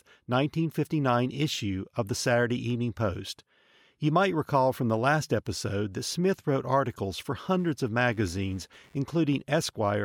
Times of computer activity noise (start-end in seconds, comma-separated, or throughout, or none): 7.43-9.43